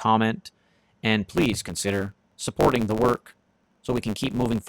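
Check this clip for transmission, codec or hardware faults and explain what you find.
From 1.31 s to the end, the speech buzzes at 100 Hz and runs about 1.09 times fast with its timbre kept: a block size mismatch (truncated) dropping each block's tail.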